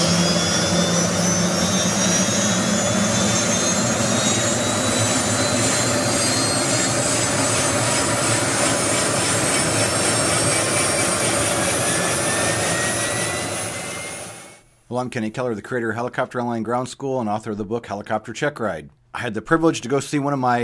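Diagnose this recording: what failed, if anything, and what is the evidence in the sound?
Nothing failed; no fault can be heard anywhere.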